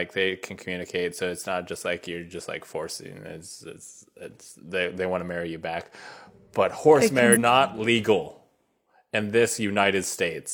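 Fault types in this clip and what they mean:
compressed frames skipped: A run of encoded frames never reached the output, either missing from the stream or rejected by the decoder as corrupt, so playback leaps forward with no pause. Near 7.32 s the speech jumps ahead by roughly a third of a second, which fits about seven lost frames of 42.7 ms each. The join ends around 7.37 s.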